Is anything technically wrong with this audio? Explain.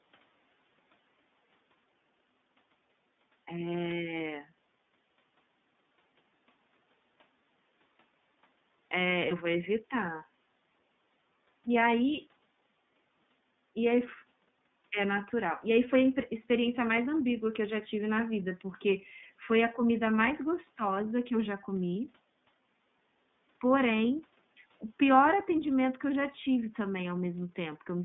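Yes. iLBC codec damage runs throughout. The speech was squeezed into a 150 Hz to 3.6 kHz line band, with each 30 ms frame coded independently, which fits the 13.33 kbps mode. This makes it plainly rough and synthetic-sounding.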